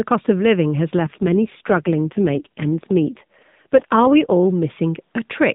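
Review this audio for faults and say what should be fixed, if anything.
From 0.98 to 4.32 s there's an AMR rate drop: the speech turns buzzier and more synthetic, with no gap and the same 4 kHz band, which fits the codec falling from 12.2 to about 4.75 kbps to protect bits on a weak radio link. Better coverage or signal margin on the mobile side keeps the network from forcing the codec down.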